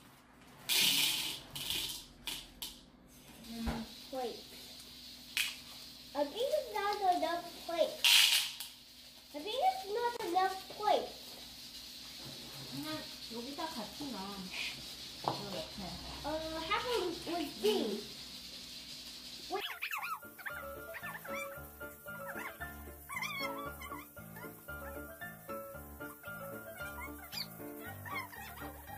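At 10.17 s to 10.20 s a gap at a join of encoded pieces opens a gap of about 30 ms in otherwise continuous sound. Two separately encoded segments were butted together with the encoder's start-up delay and final-frame padding left in, so the audio drops out with smeared edges and resumes exactly where it stopped.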